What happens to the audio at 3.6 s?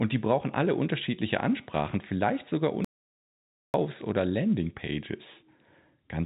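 At 3.6 s the speech sits inside an audio dropout to silence from 2.85 to 3.74 s. Input was likely lost while silence was written, leaving a flat waveform line and a blank spectrogram gap.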